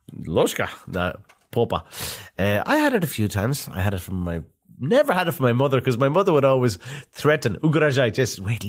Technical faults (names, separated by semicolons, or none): none